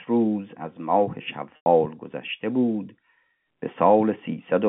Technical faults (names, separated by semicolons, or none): packet loss with pitch repetition